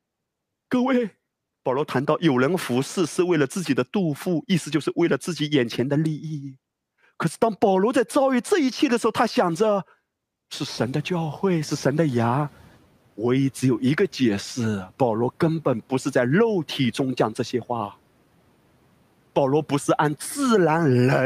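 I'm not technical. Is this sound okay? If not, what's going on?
No. The noise suppressor was catching up: when room noise jumped around 10.5 s, it lagged, so louder background noise leaked through from 10.68 to 12.77 s before fading down.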